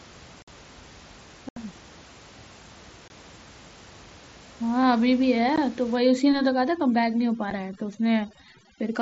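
Unconcealed Bluetooth headset packet loss leaves abrupt-edged holes at 0.42–0.48 s, 1.49–1.57 s, 3.08–3.10 s and 5.56 s, where lost headset voice packets were replaced by silence or an idle pattern. From 5.96 s to the end, overdone noise removal pushes bands near the noise estimate far down, leaving a lowered, twinkling background. Within that section, one further brief packet-loss dropout lands at 7.50 s.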